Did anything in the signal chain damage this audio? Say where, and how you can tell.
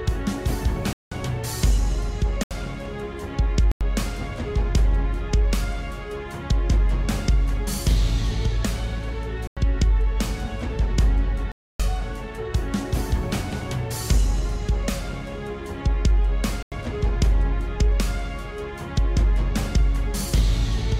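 Yes. The damage happens at the driver or buffer stage. There are six blocks of digital silence, starting at 0.93, 2.43, 3.72, 9.47, 11.52 and 16.63 s. They last about 186, 74, 93, 93, 279 and 93 ms. Each one drops straight to silence and comes back with no fade. The repeated 93 ms gaps and the 186 ms gap fit lost buffers of 4096 and 8192 samples. The program likely did not fill the output buffer in time.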